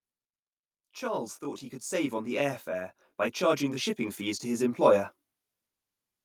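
Throughout, the speech sounds rough and slightly doubled. This is channel delay (comb filtering): one channel runs roughly 20 ms late, so mono summing carves evenly spaced notches from about 20 Hz upward.

From 1.89 s, just after "thought he could", voice and background swell together by about 11 dB until 5.14 s. The automatic gain is rising, pushing up level it judged too quiet.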